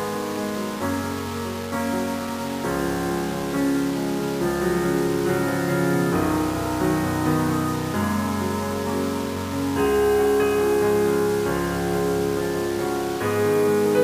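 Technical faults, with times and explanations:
Throughout, low bit depth without dither: grainy distortion rides on the sound and changes with it, with quiet passages sputtering or dropping out. Likely 5-bit rounding, leaving error about 15 dB below the signal. Waveforms show stair-stepped levels; spectrograms show broadband hash that tracks the signal.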